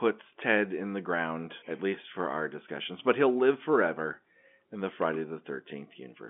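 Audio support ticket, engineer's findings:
Nothing stood out on listening to the speech, which carries the expected 200 Hz to 3.5 kHz line band of G.711 telephone coding.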